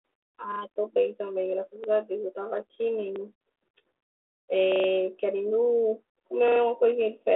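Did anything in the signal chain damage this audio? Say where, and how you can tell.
Yes, at the driver/buffer stage: the speech has a repeated buffer stutter at 0.52, 1.84, 3.16, 4.72 and 6.48 s. Each one is the same 40 ms slice played again with a hard seam at every join: twice extra at 0.52 s, once at 1.84 and 3.16 s, four times at 4.72 s and three at 6.48 s. Playback resumes where it left off, so essentially nothing gets skipped. The late audio just got padded with replays. The telephone-band G.726 sound, roughly 300 Hz to 3.6 kHz, comes from the codec working as designed.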